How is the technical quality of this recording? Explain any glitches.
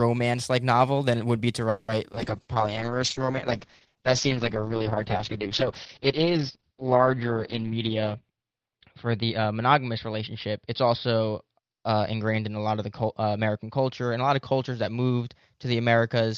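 The recording has several call-transmission faults, all in the first ten seconds, and one of them lasts to the end.

At 1.69 to 1.90 s there is a call audio freeze. The last sound stretches into a fading buzz. This is likely from delayed packets draining the jitter buffer. It adds a gap of about 0.19 s without losing speech.

At 2.12 to 2.15 s and 2.15 to 2.18 s, short concealed packet loss gives brief smears. The receiver filled missing fragments by extending the previous sound.

From 2.2 s onward, a call bitrate drop makes the speech rough and muffled. Everything above 6 kHz is cut. That fits the encoder falling from about 32 kbps to about 7 kbps.

At 7.63 to 9.46 s, a jitter buffer speed-up hurries the speech to 109% at unchanged pitch. Pitch-period slices totalling about a fifth of a second are removed to cut delay.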